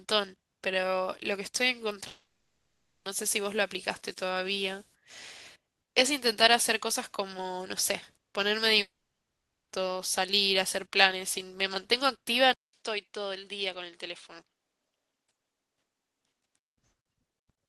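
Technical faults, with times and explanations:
2.07–3.07 s and 8.81–9.71 s, long network dropout: audio stops, a brief fading tail, then roughly 0.8 s of near-silence before speech resumes with a chunk missing, likely packet loss.
12.53–16.78 s, input switched to a poorer device: a 0.2 s gap, then duller, quieter sound with nothing above 10.5 kHz and a faint new noise floor, likely a microphone change.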